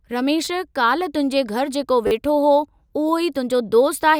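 Speech with two repeated buffer faults, where fresh audio failed to reach the output in time and the device replayed its last block instead. From 0.45 to 0.47 s a piece of about 10 ms sounds three times in a row, and from 2.07 to 2.11 s it sounds five times. The hard joins make each a brief buzzy stutter, which fits a 10 ms buffer. Roughly 20 ms and 40 ms of audio are lost.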